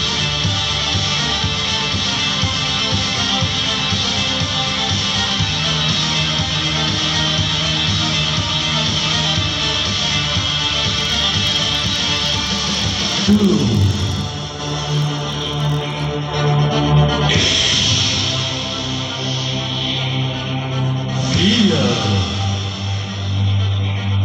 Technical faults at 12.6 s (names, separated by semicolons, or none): filter restarted on every block